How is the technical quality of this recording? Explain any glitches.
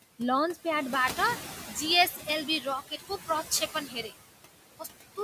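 The recording has three processing faults layered over the speech, with room noise sitting about 13 dB below the voice.

Noise suppressor artifacts run throughout: steady background is pulled down by about 16 dB between phrases, so the noise sinks between the words and rises under them.

Pre-emphasis left on, from 0.96 s to the end: a treble boost, consistent with a J.17 curve, was never undone, leaving highs about 11 dB strong at 10 kHz, so the speech turns thin, bright and hissy.

Speech cut by the noise suppressor, at 2.11–2.27 s, 2.88–3.29 s and 3.67–4.13 s: the suppressor mistook quiet speech for noise and dipped it by up to about 9, 13 and 10 dB. Short stretches of roughly a tenth to a fifth of a second sound swallowed.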